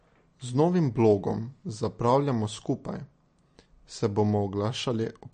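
From start to finish the speech has a hard ceiling near 9.1 kHz and a watery, swirly texture, with chirpy s sounds. That's likely MP3 compression starved of bits, fitting a bitrate around 40 kbps, so weak frequency lines flicker between frames.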